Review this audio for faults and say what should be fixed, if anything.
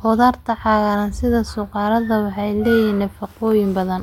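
Nothing stood out on listening to this speech recording, so there is nothing here that needs fixing.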